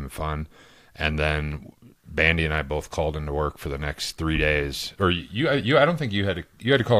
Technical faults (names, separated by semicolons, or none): clock drift buffer slips